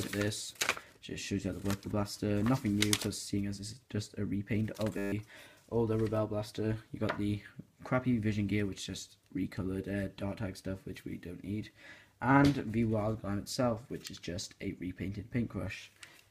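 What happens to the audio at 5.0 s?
At 4.98 s the audio locks into a system hang loop that lasts until 5.12 s. The machine stalled while the sound hardware kept replaying its ring buffer, so one 10 ms slice repeats 14 times and comes out as a steady buzz at 100 Hz, with about 150 ms of real audio lost. On a waveform it shows as an identical short shape tiled end to end. A spectrogram shows evenly spaced harmonics of 100 Hz in a flat block.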